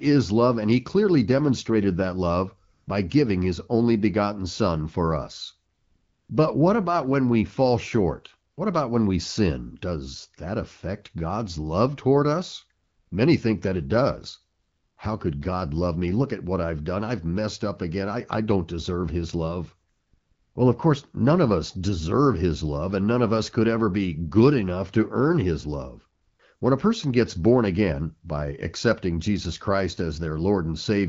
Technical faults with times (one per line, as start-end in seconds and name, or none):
2.73-2.87 AMR comfort noise
5.73-6.29 AMR comfort noise
8.51-8.57 AMR comfort noise
12.83-13.11 AMR comfort noise
14.59-14.97 AMR comfort noise
19.89-20.55 AMR comfort noise
26.21-26.61 AMR comfort noise